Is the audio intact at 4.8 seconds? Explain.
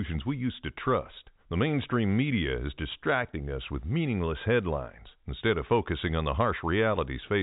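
Yes, the audio at 4.8 seconds is intact, carried through G.711 telephone coding with its usual band limit at about 3.8 kHz.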